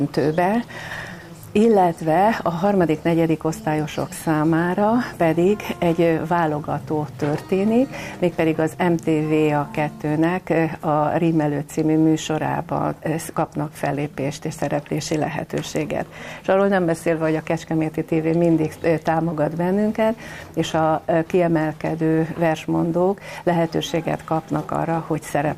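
From 0.40 s to 24.90 s, faint clock slip clicks tick about every 0.7 s. Two clocks likely drift apart by roughly 30 ppm, so single samples slip.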